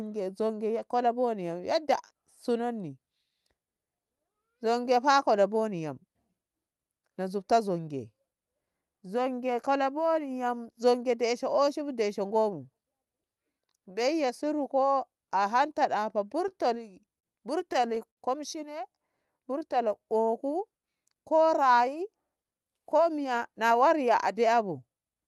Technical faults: repeated stalls (stutter); jitter buffer slow-down; jitter buffer speed-up

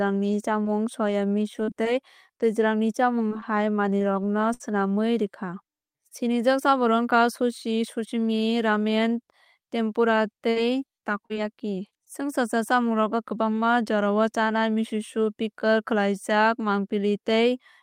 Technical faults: scattered short gaps; repeated packet loss (robotic sound)

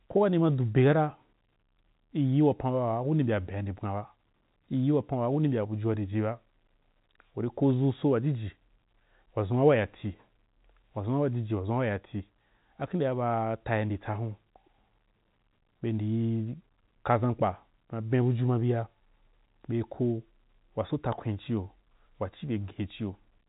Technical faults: none

